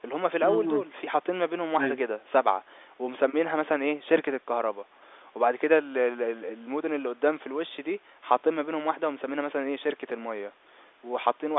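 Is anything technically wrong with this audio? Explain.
No, nothing in this audio is technically wrong.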